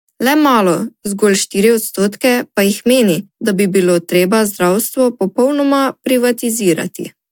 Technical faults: none

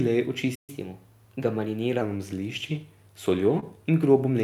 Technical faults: playback stall; catch-up at higher speed; short concealed packet loss

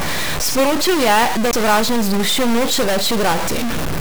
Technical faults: stuck bit; CD skip

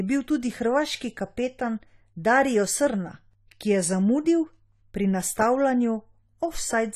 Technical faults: AAC compression

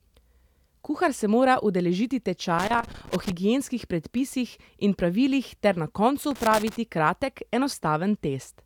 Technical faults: loose connector crackle

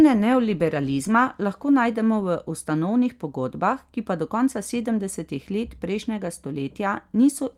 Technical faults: none

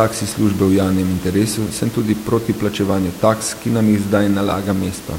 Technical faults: none

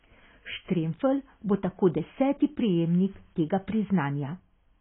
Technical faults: AAC compression

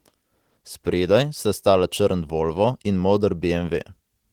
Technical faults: none

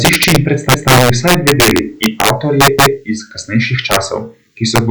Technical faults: integer overflow; repeated buffer

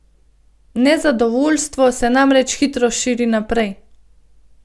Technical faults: none

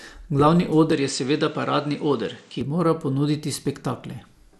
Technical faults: MP2 compression; input switched to a poorer device

